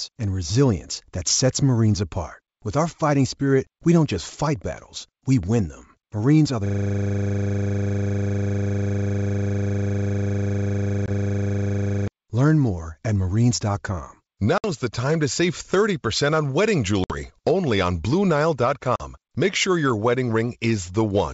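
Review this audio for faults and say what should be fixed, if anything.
A system hang loop runs from 6.66 to 12.08 s. The driver froze while the sound hardware kept replaying its ring buffer, so one 40 ms piece of speech repeats about 135 times. This gives a steady 25 Hz buzz in place of the speech, which fits a 40 ms buffer.

Packet loss on an ADPCM call occurs at 11.06 s (20 ms, inside the loop), 14.58 s (60 ms), 17.04 s (60 ms) and 18.96 s (40 ms). Dropped packets became hard-edged silent gaps, and the decoder's predictor and step size lost sync with the sender's. Each time the speech returns slightly distorted before settling. The G.722 wideband coding at 64 kbit/s carries the speech with faint or no codec damage.

Prevention: fix the driver stall with a watchdog that mutes the output on a hang, and add packet-loss concealment with decoder-state resynchronisation to the ADPCM link.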